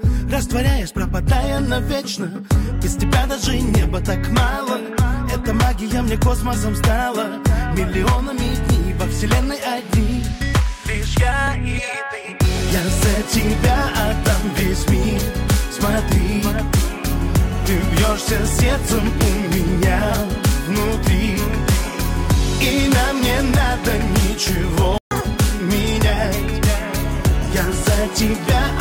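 At 24.98 s the output cuts to silence for 0.13 s, ending at 25.11 s. This is a playback stall: the sound halts mid-flow rather than fading, and the gap is long enough to register as a hole in the audio. The likely cause is the player running short of buffered data or its output thread being blocked, so nothing was delivered to the device until it recovered.

From 25.11 s to 25.24 s the player performs catch-up at higher speed, running the queued backlog at 2.0 times normal rate by resampling. Because the sound is sped up by resampling, pitch rises together with tempo, by around ten semitones here, giving a brief chipmunk-like lurch. After about 0.13 s of this the lost time is recovered, and speed and pitch drop back to normal.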